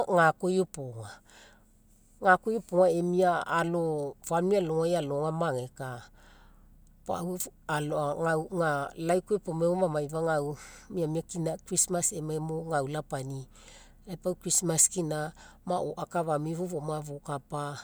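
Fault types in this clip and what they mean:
Nothing here to flag; I couldn't pick out any technical fault anywhere in the recording.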